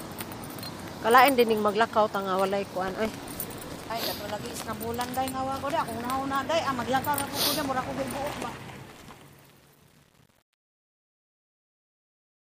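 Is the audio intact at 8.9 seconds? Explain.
No. At 8.9 s the fade sounds gritty and stepped, as truncation distortion on a fade that runs from 8.28 s to the end and is at its worst from 8.44 s. The fade keeps only about 9 bits with no dither, so the shrinking waveform collapses into coarse square steps.

A burst of crackle also rides on top from 8.90 to 9.14 s. This is processor overload crackle: the processor repeatedly missed its deadlines, and the pattern fits a buffer of around 1.5 ms. Each of dozens of misses replayed a scrap of old audio with hard edges.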